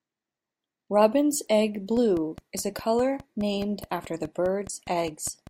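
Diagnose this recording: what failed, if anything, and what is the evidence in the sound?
A train of clicks runs from 1.97 s to 5.48 s. The clicks are evenly spaced, nearly five per second, about twenty in all. They have much the same shape and peak about as loud as the speech, so they tick through the pauses as clearly as over the talking. That steady pulse points to the analogue wiring or interface stage. The likely cause is interference from nearby equipment coupling a repeating spike into the signal path.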